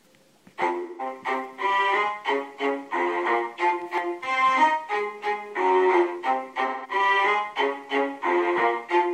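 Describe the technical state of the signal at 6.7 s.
At 6.7 s you're in the middle of an AAC frame loss with concealment, running from 6.66 to 6.90 s. Roughly 0.17 s of coded audio went missing, which fits about four lost frames. The decoder patched the hole by reusing the last good spectrum, so that stretch comes out as a smeared, noisy or phasey patch rather than the real sound.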